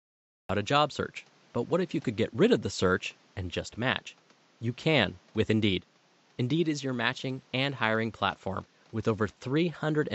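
A speech recording with a cut-off start. The first 0.49 s is pure digital silence, and at 0.49 s the speech begins abruptly partway through a sound, with no natural attack, because capture started late. On a waveform this appears as a flat line that jumps straight into the speech. On a spectrogram it is a sharp vertical edge where the speech energy begins at once. The room noise, about 34 dB below the speech, is heard only after the cut, since the stretch before it is silent.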